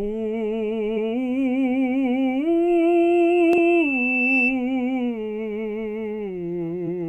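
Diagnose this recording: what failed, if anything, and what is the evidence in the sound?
Damaged data in a compressed stream, at 0.93 to 0.98 s, 3.53 to 3.59 s and 6.83 s: a storage or codec fault. Each brief disturbance in the music marks corrupted frames that the decoder misreads, after which it loses sync and resumes at the next frame header.

Loudspeaker feedback squeal, from 2.67 to 4.60 s: an analogue acoustic loop. A steady 2.7 kHz tone swells over roughly two seconds to about 5 dB above the music, because the microphone re-amplifies its own loudspeaker with loop gain above one at that frequency.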